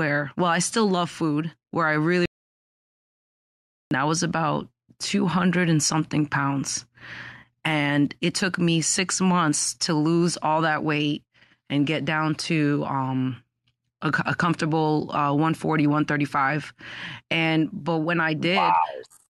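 At 2.26 s, right after "food where I really", the speech cuts to dead silence. This is an audio dropout to silence. No room tone remains. It lasts about 1.66 s, resuming at 3.91 s with "I was about". The input was likely lost while silence was recorded.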